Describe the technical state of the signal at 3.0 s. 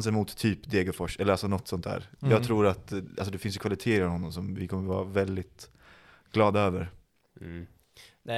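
Around 3.0 s the speech signal is intact, with no audible dropout, clipping, distortion or other technical fault at that moment.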